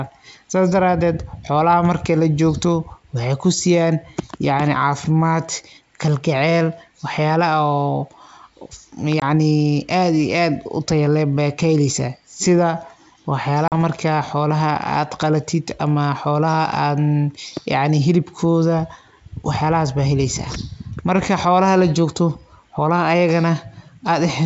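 At 9.20 to 9.23 s and again at 13.68 to 13.73 s there's packet loss on an ADPCM call: about 20 ms, then 40 ms, of audio drops to hard-edged silence. The receiving decoder's predictor and step size lose track of the sender's, so the sound comes back with brief distortion before settling.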